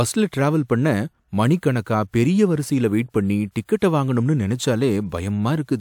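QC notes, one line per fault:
No technical faults are audible anywhere in the speech signal.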